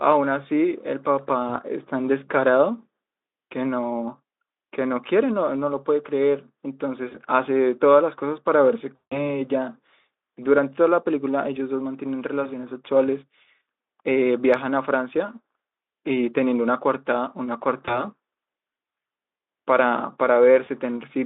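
At 1.47–1.50, 7.09–7.16, 12.43–12.47, 17.85–18.04 and 20.65–20.69 s there is VoIP packet loss concealed by the speech codec. Each gap fits one lost 20 ms frame. The decoder fills it by repeating its last pitch and filter. This gives a brief stretched smear. The longest loss runs 8.96–9.40 s. About 160 ms is missing there. The fill fades, and the speech stays weak until the decoder recovers. Between losses, the narrow Speex band is audible.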